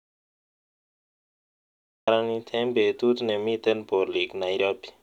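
The clip opens in silence, with no room tone at all, until 2.08 s, when speech cuts straight in at "eng' betut nemiten". This is an audio dropout to silence, already under way from the start, most likely a lost input while the recorder kept writing silence.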